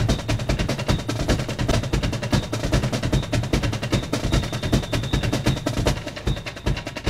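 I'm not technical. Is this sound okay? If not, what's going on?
No. At 1.68 to 1.72 s the music briefly breaks up. This is damaged data in a compressed stream, so the player misreads that bit.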